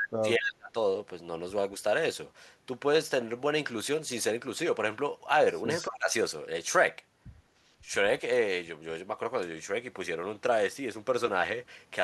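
Speech with an echo leak at 0.00 to 0.04 s, 0.45 to 0.49 s and 5.69 to 5.91 s: a copy trailing by 228 ms, about 5 dB below the speech early on and about 15 dB below later. It is a distinct repeat rather than smeared reverb, likely from a far-end echo canceller letting loudspeaker pickup through. Speech suppressed in double talk at 0.06 to 0.76 s, dipping as deep as roughly 30 dB over about half a second, and again at 5.89 to 6.11 s by roughly 15 dB. These dips fall where both sides talk at once rather than at random like network dropouts, which likely points to the canceller turning down its own talker along with the echo.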